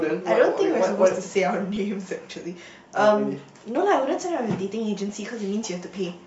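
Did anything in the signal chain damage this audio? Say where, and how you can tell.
Yes. It's at the codec stage: the speech sounds grainy and breathy throughout, with noise-filled highs. That's likely Bluetooth LC3 compression at a modest bitrate.

On the wireless link, lost LE Audio frames cause short, noisy smears at 1.76 s and 5.09 s. Each gap is 10 ms, patched with reused, scrambled spectrum.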